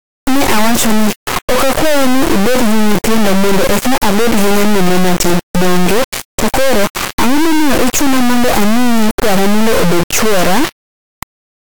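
From start to finish, the speech has an integer read as float fault, which points to 32-bit integer samples being interpreted as 32-bit floats. The resulting values flip between near-zero and far past full scale, giving a harsh, extremely loud square-wave buzz that drops to silence wherever the audio is very quiet.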